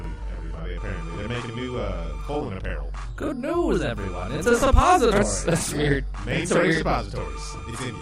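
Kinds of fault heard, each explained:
Channel delay (doubling): Every sound in the clip is followed by a second copy about 43 ms later at equal level, heard as a tight slap or doubling. One channel runs late by a buffer, which fits 2048 samples, and the channels are summed to mono.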